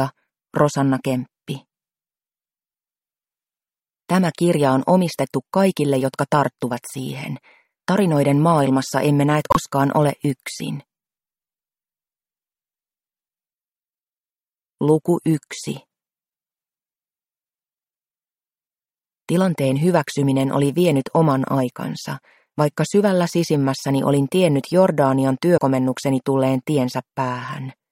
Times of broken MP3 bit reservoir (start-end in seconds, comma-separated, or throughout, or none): 9.50-9.57, 25.56-25.59